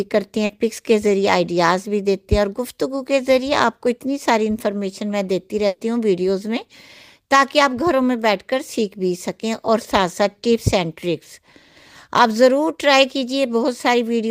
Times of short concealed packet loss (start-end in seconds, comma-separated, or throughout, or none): 0.45-0.51